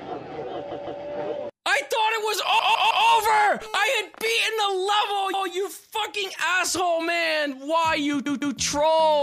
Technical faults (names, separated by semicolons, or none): repeated frames